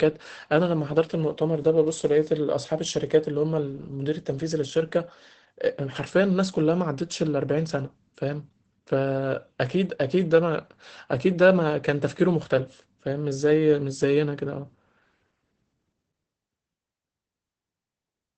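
Opus voice compression runs throughout this speech clip: the SILK coder's wideband mode removes everything above about 8.6 kHz and coarsely codes the excitation, consistent with roughly 12 kbps.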